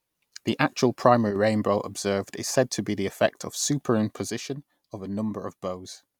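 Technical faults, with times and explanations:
1.31–1.36 s and 4.30 s to the end, one channel drops out: the level suddenly falls by about 6 dB, briefly just before "rainbow observed is said" and then for the rest of the clip. That's likely one stereo channel going missing, which halves the level of the mono sum.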